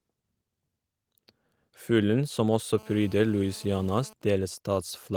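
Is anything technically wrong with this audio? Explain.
Yes. Two related interference faults from a nearby 2G handset affect this speech recording.

From 2.78 to 4.13 s, just after "som også", there is GSM phone buzz. A phone in an active call is transmitting its bursts about 217 times a second. The audio input rectifies those radio pulses, which produces a hard, raspy buzz at about 217 Hz. It sits about 26 dB below the speech and has nothing to do with it. On a spectrogram it appears as a steady comb of evenly spaced harmonic lines at multiples of 217 Hz running right across the band. The waveform shows a regular pulse train underneath the speech.

From 4.22 s to the end comes the GSM signalling bursts fault. The phone is still in the call, but its user has gone silent, so it transmits only short groups of bursts, and these are rectified in the same way. At a low level, well below the speech, they form even ticks with a longer 217 Hz buzz twice a second. 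A spectrogram shows short vertical clusters of harmonic lines separated by gaps. The waveform shows spaced packets of spiky pulses rather than a continuous train.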